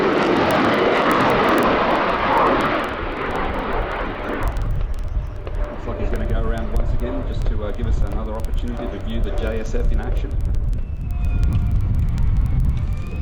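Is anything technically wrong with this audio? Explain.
Yes. Word clock ticks run through nearly the whole clip, from 0.14 s to 13.21 s, recurring about every 50 ms, a few hundred in all. The receiving device is clocked independently of the sender rather than locked to it, with a mismatch of roughly 400 parts per million. Each time the two clocks slip past one another, a single sample is dropped or repeated, and that discontinuity sounds as a sharp tick repeating at a steady rate of about twenty per second.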